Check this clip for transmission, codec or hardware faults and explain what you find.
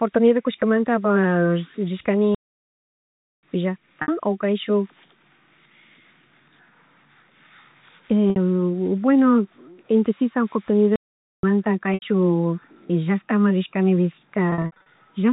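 Two kinds of fault turn up in this speech clip: two playback stalls and four spots of packet loss with pitch repetition. The telephone-band character of the audio comes from G.711 coding, which adds at most a faint noise of its own.

Playback stalls happen at 2.35 to 3.43 s, about 1.08 s of silence, and at 10.96 to 11.43 s, about 0.47 s. In both, the speech cuts out mid-flow and then picks up again. The likely cause is the player running dry of buffered data or having its output thread blocked, so nothing reached the output until it caught up.

Packet loss with pitch repetition hits at 4.02 s (60 ms), 8.30 s (60 ms) and 11.94 s (80 ms), and again across 14.50 to 14.86 s, where about 220 ms goes missing in scattered bits, the longest run being 60 ms. The receiver fills each gap by looping the last pitch period and fading it down. You hear a brief held, buzzy tone where the speech should continue, and the last stretch is patched over repeatedly.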